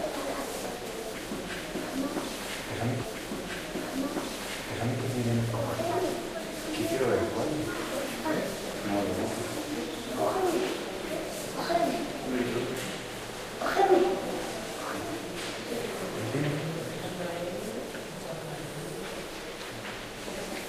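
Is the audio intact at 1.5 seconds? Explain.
Yes, at 1.5 seconds the sound plays through cleanly with no dropout, click, distortion or other fault.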